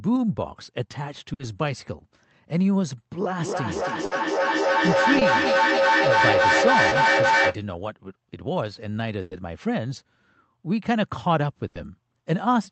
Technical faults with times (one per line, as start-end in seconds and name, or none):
1.33-1.41 burst of packet loss
3.33-7.65 feedback echo between two devices
4.05-4.13 burst of packet loss
5.19-5.23 short concealed packet loss
6.89-6.93 short concealed packet loss
9.21-9.33 burst of packet loss
11.67-11.77 burst of packet loss